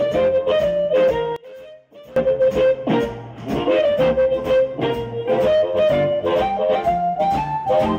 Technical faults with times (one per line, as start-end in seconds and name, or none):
1.36-2.16 one channel inverted